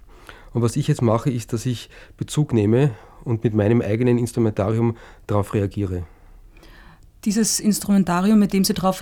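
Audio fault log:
No audible faults in this speech recording.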